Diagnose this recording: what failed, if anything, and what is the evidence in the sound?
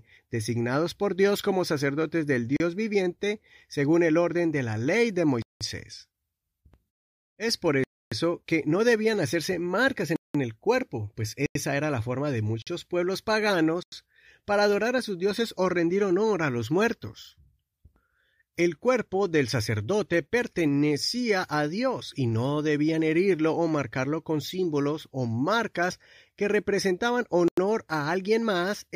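A block of digital silence recurs at the buffer stage, with hard dropouts at 2.57 s (after "como sacerdotes del"), 5.42, 7.84, 10.16, 11.46, 12.62, 13.83 and 27.48 s. Each lasts 35 to 279 ms. The 93 and 186 ms holes fit missed 4096- and 8192-sample buffer fills.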